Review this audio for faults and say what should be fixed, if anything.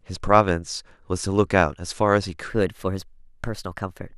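From 2.50 s to 4.17 s the speech abruptly turns hurried and higher-pitched, a section at the wrong speed running at 1.14 times its recorded rate, roughly two semitones sharp. Speed and pitch rise together, which points to this stretch likely being played against the wrong clock. Prevent it by confirming every segment shares the same sample rate before editing or playback.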